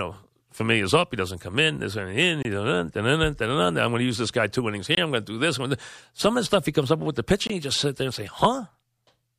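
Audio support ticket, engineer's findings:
Gap between chunks, three times: 2.43 to 2.45 s, 4.95 to 4.97 s ("this guy two innings" / "I'm going to do"), 7.47 to 7.50 s ("comes up with the" / "you just sit there"). Hard-edged silent holes of about 23 ms, repeating every 2.5 s. Probable component is the chunked playback or storage path, with padding or late start at each join. Unlike packet-loss dropouts, no speech is missing, and the flow resumes where it stopped.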